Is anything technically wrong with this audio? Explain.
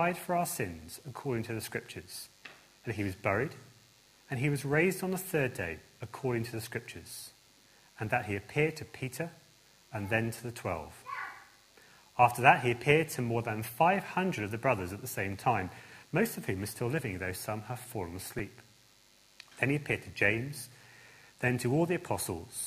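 Yes. At 18.39 s there is a repeated buffer: fresh audio failed to reach the output in time, so the device replayed its last block, about 5.8 ms long, twice more, which fits a 256-sample buffer. With a piece that short, the three identical copies fuse into a brief click or buzz rather than an audible stutter, and essentially nothing is lost. The waveform shows an identical segment tiled three times with hard seams, and the spectrogram shows a thin vertical stripe.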